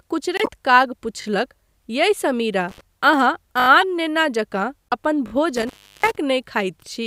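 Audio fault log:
0.37–0.49 s, 3.81–3.83 s, 4.89–4.93 s: corrupt frame decoded. Damaged compressed frames were decoded and played anyway, around four at 0.37 s, one at 3.81 s and about three at 4.89 s. Misread codes and wrong gains push energy into frequencies that don't belong to the speech, so each hit sounds like a chirpy, noisy blip peaking near about -10 dBFS and lasting only as long as the bad frames.
1.22–1.26 s, 3.60–3.68 s, 5.28–5.32 s: repeated buffer. The same 20 ms slice of speech plays again, two extra times at 1.22 s and 5.28 s and four extra times at 3.60 s, which points to a 20 ms output buffer replayed while fresh audio was late. Each repeat meets the next with a hard join, so these come across as short stutters. No speech appears to be skipped afterwards.
2.69–2.81 s, 5.56–6.16 s: intermittent contact. A loose connection opens briefly, about 66 ms in the first event and about 342 ms in the second, longer one. 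The speech drops out while the line is open, leaving only faint hiss, and crackle marks the edges as the contact breaks and remakes.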